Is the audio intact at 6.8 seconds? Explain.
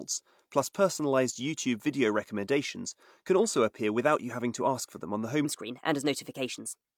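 No. From 5.45 s to the end of the clip at 6.97 s, just after "for them on the", there is a section at the wrong speed. It runs about 1.19 times too fast, likely because it was played against the wrong clock, so the speech sounds hurried and roughly three semitones higher. On a spectrogram the harmonic stripes and formants jump upward at 5.45 s and syllables shorten. On the waveform the cycles pack more tightly.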